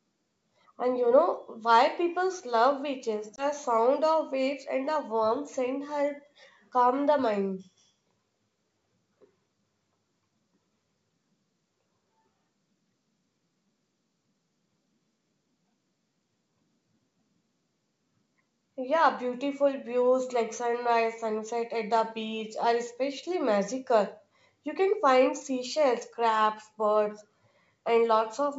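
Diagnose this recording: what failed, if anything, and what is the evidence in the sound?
Packet loss on an ADPCM call, network stage, 3.36–3.46 s: a 20 ms silent hole after "why people's love beaches", then the decoder's mismatched predictor and step size distort the restart.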